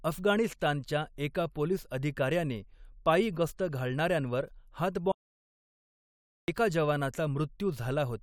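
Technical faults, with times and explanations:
5.12 to 6.48 s, audio dropout to silence: the speech just cuts out mid-flow and comes back about 1.36 s later, with dead digital silence in between, not even room tone. That points to the input likely dropping while the recorder kept writing zeros, so that stretch is gone.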